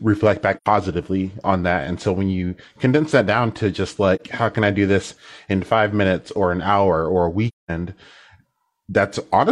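Speech with AAC frame loss with muting: soft-edged silent gaps at 0.57 s and 7.48 s (after "an hour or a"), lasting about 85 ms and 213 ms, and a brief dip of about 43 ms at 4.15 s (after "that down to just"). The decoder zeroes the lost frames' spectra, so the sound fades out and back in.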